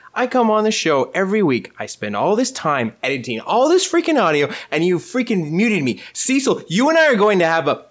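Speech passed through a call's microphone processing, which trims the lowest bass and leaves nothing above 8 kHz, with no technical fault to report.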